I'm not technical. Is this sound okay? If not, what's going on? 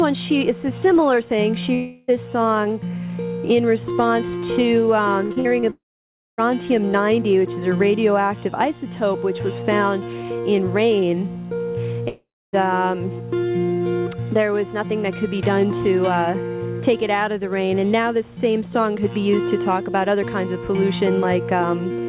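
No, there are a few spots where the sound breaks up.

The main one is a long network dropout, and it shows up three times. At about 1.74 to 2.10 s the sound stops coming through properly for roughly a third of a second, and what you hear instead is the last bit of sound stretched out into a fading buzz. At 5.70 to 6.40 s it's longer: a brief smear, then a bit more than half a second of near-silence. At 12.08 to 12.55 s the same happens, with about 0.3 s of quiet. In each case the sound picks up again further along, with that piece simply gone. Likely cause: the connection stalled and nothing arrived for those moments.

Just before the second gap, from 5.26 to 5.64 s, there's repeated packet loss, the robotic-sound kind. Five small holes, the longest under 50 ms, are patched over in quick succession, so nearly half of that short stretch is filler, which makes it sound choppy.

The slightly muffled, phone-like tone throughout, with nothing above 4 kHz, is just how this call line carries sound, not a fault.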